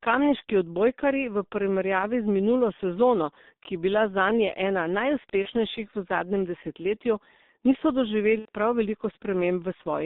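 It's a speech clip squeezed through the G.723.1 codec at 6.3 kbit/s, so it's heavily damaged. The band runs only from 200 Hz to 3.7 kHz, and the slow-updating voice model leaves it muffled and hoarse, with smeared consonants. There's also VoIP packet loss concealed by the speech codec at 5.43–5.48 s and again at 8.39–8.49 s. The gaps sound like about 30 ms and 90 ms of missing audio, which fits one and then three lost 30 ms frames. The decoder bridges each hole by stretching its last pitch and filter into a fading buzzy tone or coloured noise, and the voice stays weak or distorted for tens of milliseconds or more after the audio returns.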